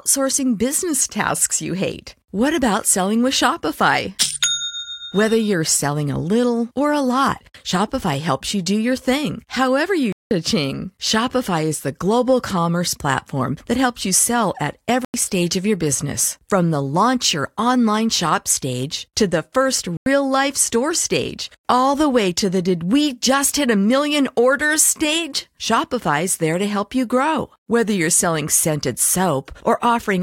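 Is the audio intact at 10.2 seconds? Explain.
No. From 10.12 to 10.31 s there's a block of digital silence, about 186 ms where the samples drop to silence, which fits an 8192-sample buffer going out empty. The speech cuts out abruptly, leaving a short hole.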